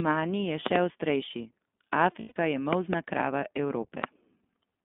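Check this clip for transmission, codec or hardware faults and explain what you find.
The speech has three kinds of fault: codec colouring throughout, loud pops in two places, and one brief dropout.

The iLBC codec shapes the whole clip. The sound is thin and boxy, with a faintly rough, synthetic edge that is plainly audible. Nothing reaches below about 200 Hz or above 3.5 kHz. This telephone-band result comes from a narrowband VoIP coder that codes each 20 ms frame's excitation on its own. The roughness fits iLBC's 15.2 kbps mode.

A loud pop breaks in from 0.66 to 0.78 s as a pair of sharp clicks, then again as a single hit at 4.04 to 4.06 s. Each peaks at about 20 dB above the speech, and the speech carries on underneath. The likely cause is a sudden voltage step or pulse, such as a switch, plug, static discharge or driver glitch, that the downstream circuitry shapes into a short, punchy transient.

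Lost iLBC frames appear from 2.20 to 2.38 s. For about 140 ms, spread over roughly 160 ms, the sound turns into a held, slightly buzzy, breathy vowel-like tone instead of moving on. The longest unbroken stretch is around 100 ms. This is the decoder concealing missing packets by repeating the last pitch cycle mixed with noise, which fits about seven 20 ms frames. Because each frame decodes independently, clarity returns almost immediately afterwards.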